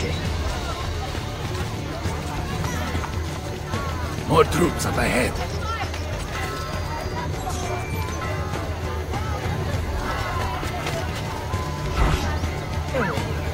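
At 12.94 s, damaged data in the compressed stream corrupts a short stretch of the encoded file, so the decoder cannot make sense of the frame it lands in. Unable to decode that frame properly, it loses its place and has to search for the next valid frame boundary before normal output resumes. The result is a brief glitch, lasting only a few milliseconds, that cuts sharply into the audio near the end of the clip.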